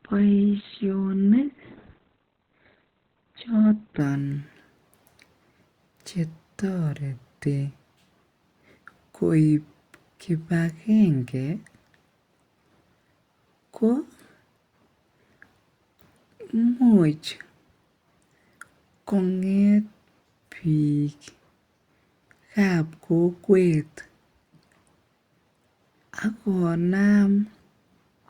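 Speech clip with an adaptive stream starting at a low bitrate: until 4.0 s nothing reaches above 4.2 kHz, fitting roughly 12 kbit/s Opus, then a gapless jump to fuller treble. The spectrogram shows a flat ceiling that suddenly lifts at 4.0 s.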